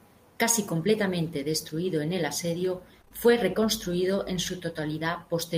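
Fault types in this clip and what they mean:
Short concealed packet loss: a brief smeared wobble from 3.01 to 3.12 s, just after "destruido en el asedio", where three consecutive 20 ms stretches never arrived and the receiver patched each by extending the preceding sound before blending back into the real signal.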